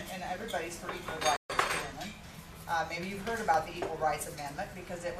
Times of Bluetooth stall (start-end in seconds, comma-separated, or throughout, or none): 1.36-1.50